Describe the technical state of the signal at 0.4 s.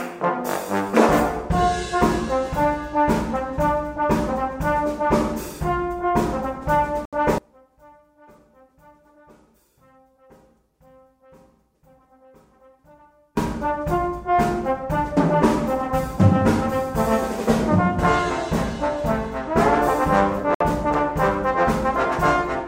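At 0.4 s the signal is intact, with no dropout, distortion or other technical fault at that moment.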